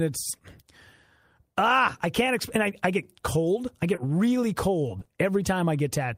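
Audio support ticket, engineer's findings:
Short concealed packet loss, three events. 3.95–3.99 s, just after "I get cold I": brief smear, about 20 ms of audio missing and 20 ms synthesized. 4.99–5.03 s and 5.03–5.07 s: back-to-back, same smear. Probable component: receiver jitter buffer/decoder concealment extending the last pitch period or shaped noise, then crossfading back. Spectrogram shows smeared or repeated harmonics with a blurred onset. Waveform shows a soft splice.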